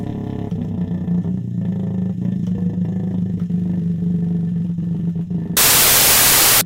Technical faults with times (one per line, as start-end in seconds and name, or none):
5.57-6.61 wrong sample width